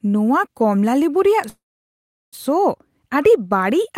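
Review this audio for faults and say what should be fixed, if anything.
From 1.49 to 2.35 s the speech halts in a call audio freeze: the last sound lingers as a brief fading buzz, then about 0.75 s of silence, and speech picks up exactly where it stopped, just before "ᱥᱚ ᱟᱹᱰᱤ". Delayed packets likely drained the jitter buffer. Unlike packet loss, nothing is cut out; instead a gap of about 0.83 s is inserted and everything after runs late. Prevent it with a larger adaptive jitter buffer and a steadier network path.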